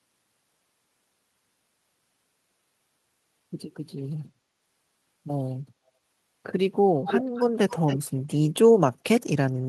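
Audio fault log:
7.07–7.45 s and 7.69–7.99 s, echo leak: the speech comes back 271 ms late, about 5 dB quieter than the original the first time, noticeably softer the second. That's likely a far-end speakerphone whose echo canceller let some of its mic pickup slip back into the call.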